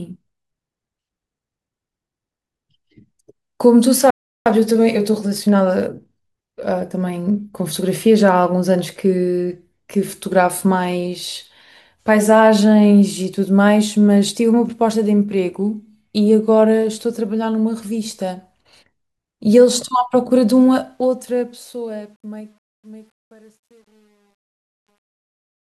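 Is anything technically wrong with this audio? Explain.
Yes, there are three faults.

Playback stall, 4.10 to 4.46 s: the speech halts mid-flow and the output goes silent for about 0.35 s before resuming. This is likely the player running short of buffered data, or its audio thread being blocked, so it had nothing to send to the output until it recovered. The gap is long enough to hear clearly as an interruption rather than a natural pause.

Time-compressed catch-up, 4.46 to 7.46 s: after the stall, the speech runs at 1.1 times normal speed for three seconds while the pitch stays unchanged. To recover the lost time, the player trims out small slices of the backlog and cross-fades across each cut. As a result, the delivery sounds hurried until playback settles back to normal pace.

Truncation distortion on a fade, 20.65 s to the end: the fade-out that begins around 20.65 s degrades toward its tail. 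The fade or gain stage keeps too few bits (the sound fits only 10) and applies no dither. As the level approaches the smallest step, the waveform collapses into a few square steps. From about 22.37 s the quiet end turns gritty.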